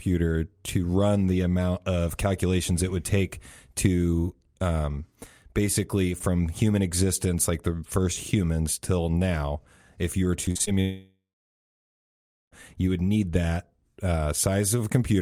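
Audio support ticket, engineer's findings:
Choppy, robotic speech 10.45 to 10.69 s. Repeated packet loss. Four short holes, longest 43 ms, about 40% of the stretch. Receiver concealment stretches the last sound over each gap.

Audio cuts out 10.81 to 12.54 s. A brief fading buzz, then about 1.3 s of silence. Speech resumes with roughly 1.7 s missing. Likely a long network dropout, with the receiver extending the last sound until concealment gives up.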